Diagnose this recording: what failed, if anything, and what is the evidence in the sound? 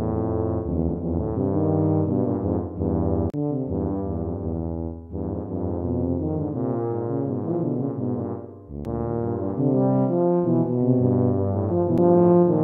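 The failure is in playback from the disc: CD skips at 3.30 to 3.34 s, 8.85 s and 11.98 s. Each is a brief mute, roughly 40 ms at the first and only a few milliseconds at the other two, with a tick as the sound resumes from a different point rather than where it stopped. The laser has jumped to another turn of the disc's spiral. A plain dropout would leave a gap and carry on in sequence, but here the continuity itself breaks.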